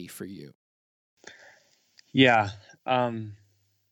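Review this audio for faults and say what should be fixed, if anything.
Nothing needs fixing: the speech signal is technically sound, with no faults anywhere in the recording.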